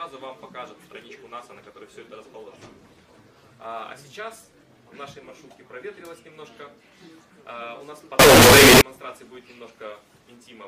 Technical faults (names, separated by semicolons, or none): signed and unsigned mixed up